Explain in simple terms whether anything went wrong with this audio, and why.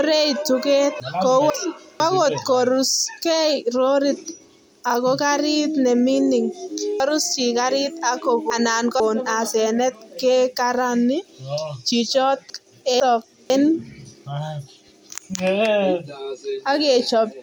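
Something went wrong three times: a half-second piece of audio reached the recording late and was slotted in after pieces that should have come after it. This fault is called chunks out of order. Nothing goes missing, but the speech jumps around. It happens from 1.0 to 2.0 s, just before "angot koruskei lorit"; from 7.0 to 9.0 s, between "ako gariit ne mining" and "asenet kekarani", where the late piece lands three pieces too far along; and from 12.5 to 13.5 s.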